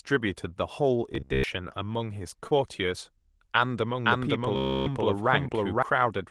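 Speech, carried over an Opus call path at 24 kbps, with several faults. From 1.12 to 1.44 s, and again from 4.56 to 4.88 s, there is robotic sound from repeated short buffers. A rigid 66.7 Hz buzz fits a 15 ms buffer being replayed, likely from late-arriving audio. Most of the first span is repeated, and all of the second. At 2.47 to 2.53 s, short concealed packet loss leaves a brief smear. About 40 ms went missing and 33 ms of it was filled in. From 4.05 to 5.83 s, a doubled audio track follows about half a second behind at roughly equal level. It starts and stops abruptly, likely from a second capture path.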